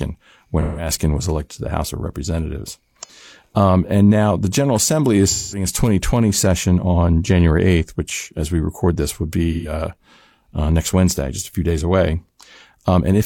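Smeared, phasey patches interrupt the speech at 0.61 to 0.89 s, 3.03 to 3.10 s, 5.28 to 5.66 s and 9.52 to 9.72 s. This is AAC frame loss with concealment: the decoder patched each gap of roughly 40 to 210 ms by reusing the last good spectrum.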